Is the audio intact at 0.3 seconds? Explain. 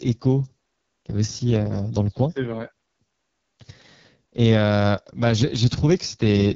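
No. At 0.3 s the speech already sounds rough and raspy, with a dull top end that stops near 7.5 kHz, and this roughness runs through the whole clip. The cause is the AMR wideband (HD Voice) codec at a very low rate, one that fits its lowest 6.6 kbit/s mode. At that rate the pulse-driven vocal tract model has too few bits to follow the speech finely, so it turns coarse and buzzy.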